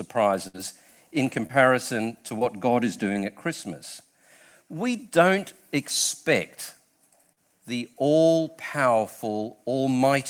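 A burst of packet loss runs from 0.47 to 0.60 s. About 60 ms of audio failed to arrive in time, and the receiver extended the preceding sound for roughly 64 ms, letting it fade into a held buzz or hiss before playback resumes further on, with about 10 ms dropped at the rejoin. Short concealed packet loss follows at 1.47–1.51, 2.39–2.43, 3.13–3.17 and 7.33–7.38 s. Each time about 20 ms went missing (40 ms in the last case), and the decoder bridged the hole by extrapolating the previous sound before blending back into the real audio, heard as a brief smear or wobble.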